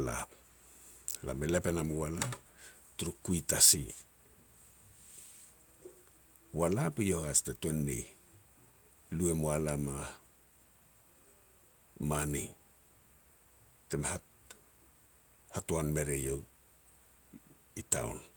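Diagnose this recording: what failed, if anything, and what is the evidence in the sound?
Nothing in the speech recording points to a failure at any stage of the chain, from capture and conversion through to playback.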